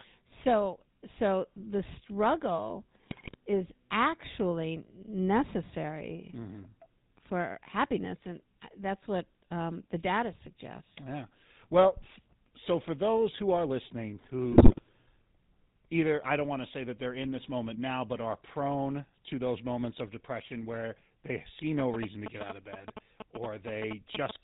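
It's a speech clip that's been through the GSM full-rate codec the whole way, and the codec damage is plainly audible: everything above 4 kHz is gone, and the pulse-driven vocal-tract model, which keeps only every third excitation sample, leaves that buzzy, gravelly roughness on every word, consistent with the 13 kbps full-rate coder. Then there are two patches of GSM bit errors, from 3.08 to 3.35 s between "so the struggle" and "is actually", and from 14.52 to 14.81 s right after "those who are listening". Corrupted filter, pitch or gain values reach the decoder frame after frame for about a quarter second each time, so the speech turns garbled, and the second patch carries the higher error rate. Finally, GSM signalling bursts come in from 21.79 to 24.31 s, starting after "depression where they see". That's a nearby 2G phone exchanging short groups of radio bursts before a call or text. 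The audio circuit rectifies them into a galloping dit-dit-dit of 217 Hz buzzes, sitting only a little below the speech level.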